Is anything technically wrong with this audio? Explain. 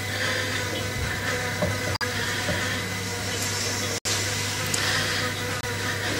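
Yes. Three corrupt frame muted dropouts occur, at 1.94 to 2.05 s, 3.98 to 4.07 s and 5.60 to 5.64 s. Damaged compressed frames were rejected by the decoder and replaced with silence, so the sound cuts out abruptly. Each gap spans several frames. The waveform shows flat silent holes, and the spectrogram shows blank vertical bands, while timing is preserved.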